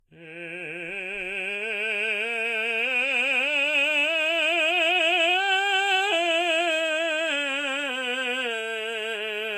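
Low-bitrate audio saved at a high bitrate runs throughout this music clip: nothing is present above 14.2 kHz, and the smeared, thin detail points to a low-bitrate Vorbis source, likely re-encoded as roughly 256 kbit/s MP3, which cannot restore what was removed.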